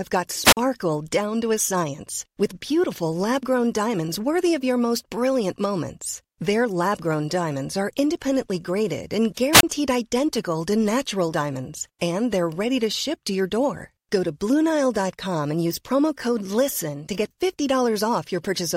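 Two wireless microphone squelch dropouts occur, at 0.44–0.57 s and 9.54–9.63 s. Each time the radio link fades, hiss rises, then the receiver's squelch mutes for about 46 ms and 28 ms. Waveforms show flat gaps; spectrograms show broadband noise preceding blank columns.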